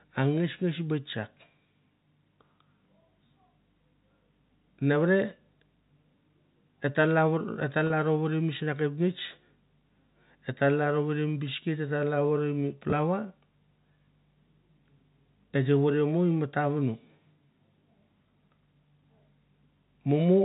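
Speech heard through a G.711 telephone path shows packet loss with pitch repetition at 7.87–7.90 s. About 30 ms went missing, which fits three 10 ms packets, and the receiver looped the last pitch period to fill the gap. The result is a brief, slightly held buzz, seen as frozen harmonic stripes on a spectrogram and repeating cycles in the waveform.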